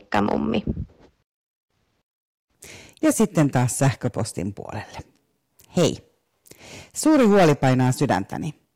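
Speech with hard clipping in four bursts: 0.14 to 0.57 s, 3.05 to 4.39 s, 5.78 to 5.88 s, and 7.06 to 8.17 s. Peaks exceed what a stage can pass, by about 7 to 9 dB, then about 14 dB at the end. Flattened tops add high harmonics, giving harsh fuzz.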